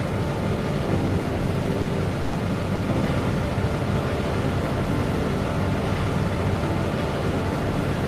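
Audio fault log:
1.81 s and 2.75 s: short concealed packet loss. About 40 ms, then 20 ms, arrived too late; the receiver extended the preceding sound, heard as a brief smear or wobble.
2.21 to 2.35 s: burst of packet loss. About 120 ms went missing together; the last sound was stretched and faded, then audio resumed further on.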